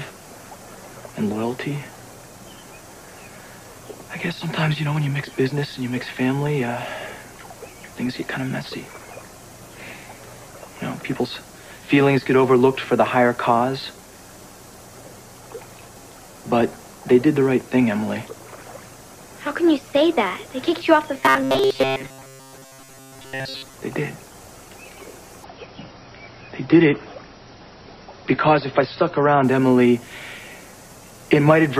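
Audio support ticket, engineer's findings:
Robotic sound from repeated short buffers, 21.15 to 23.75 s. Sound goes rigid and metallic, locked to a buzz around 133 Hz, which fits a loop of roughly 7.5 ms. Likely playout underrun: the player replays its last tiny buffer to cover gaps, so most of that stretch is repeats, not real audio.

Adaptive stream at a lower bitrate, 25.44 to 29.44 s. Abrupt quality drop with no gap. Top end gone above 5.8 kHz, codec smear up. The sound suggests a switch from a 128 kbit/s MP3 rendition to one around 23 kbit/s. Player stepped down on a slow connection, then back up.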